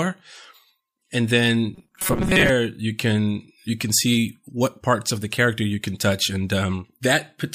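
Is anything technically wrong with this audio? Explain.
Yes. From 1.75 to 2.49 s the speech turns into a rigid, metallic buzz pitched at 188 Hz that still loosely tracks the words. This is robotic sound from repeated short buffers, likely caused by new audio arriving too slowly, so the player loops the last fragment of roughly 5 ms (one cycle of 188 Hz) in its place. About half of this stretch appears to be repeated material, and the skipped real audio is lost.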